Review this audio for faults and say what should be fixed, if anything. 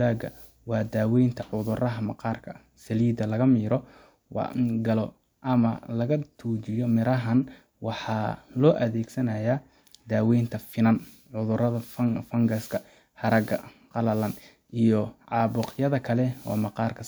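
Nothing stood out on listening to the speech, so there is nothing here that calls for a fix.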